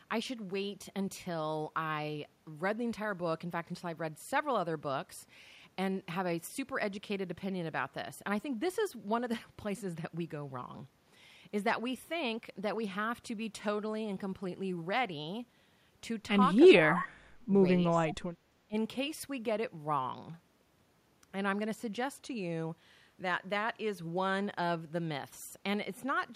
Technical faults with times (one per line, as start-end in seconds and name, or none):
16.68-17.22 speech suppressed in double talk
16.99-17.08 echo leak
17.88-18.16 speech suppressed in double talk
18.08-18.15 echo leak
18.68-18.76 speech suppressed in double talk